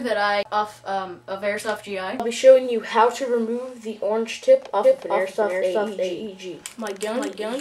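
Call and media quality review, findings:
Doubled audio track, 4.84 s to end of clip. A second full-band copy of the sound trails the original by roughly 400 ms at about equal level, entering abruptly with no decay or room colouring. Likely cause: a slower secondary capture path mixed back in, or an edit holding two offset copies. On a spectrogram, every onset repeats about 0.4 s later. On the waveform, transients appear twice with matching amplitude.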